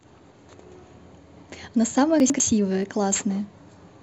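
Between 2.2 and 2.4 s, chunks out of order: one 100 ms chunk was written a chunk late, so two pieces swap places and the speech jumbles, with three hard joins. At about 2.83 s, overlap between stream segments: the player trims overlapping timestamps on 2-second segments, discarding about 26 ms of real audio and producing a brief skip.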